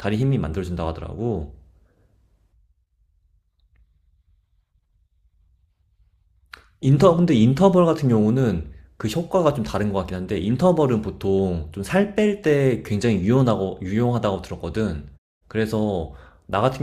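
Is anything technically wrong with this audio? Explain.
No technical faults are audible.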